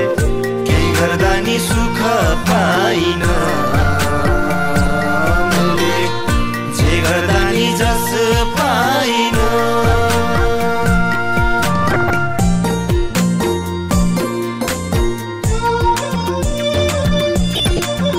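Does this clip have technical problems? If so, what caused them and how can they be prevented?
Yes. DAB burbling appears at 2.53–2.56 s, 4.76–4.91 s, 11.82–12.18 s and 17.51–17.79 s as short noise blips in separate frequency bands. Weak reception let bit errors, around a few tenths of a percent, pass error correction into the MP2 samples and scale factors. Better antenna placement or a stronger multiplex signal prevents it.

From 15.56 s to the end the pace abruptly rises to 1.64 times speed while pitch stays unchanged, so the audio sounds rushed. The likely cause is a time-stretched section, where software dropped short pieces to shorten the passage. Editing to length instead of stretching prevents it.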